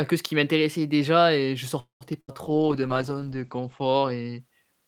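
It's a short piece of speech, and it hits three separate problems in quick succession. First, at 1.79 s the sound stalls until 2.04 s. The last bit gets stretched into a fading buzz or hiss, and for about 130 ms of that stretch it's just silence. Then the speech picks up exactly where it left off, with nothing lost, so the rest of the clip runs roughly 0.21 s later than it should. That's a call audio freeze, most likely packets held up in the network long enough for the jitter buffer to run dry and the receiver to paper over the wait. Right after, from 2.21 to 2.31 s, there's a burst of packet loss. This time the receiver fills about 73 ms by holding the last sound and fading it down, but when the audio comes back, about 80 ms of speech has simply gone. Unlike the freeze, this is a true hole rather than a pause. Finally, from 2.45 s to 4.46 s, a call bitrate drop takes over. The encoder gets squeezed from 48 kbps down to 11 kbps and stays at the bottom for about 1.7 s. 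You can hear it turn coarse and watery, and the top end disappears, with the bandwidth narrowing from 20 kHz to 8 kHz, so the speech sounds muffled until the rate climbs back.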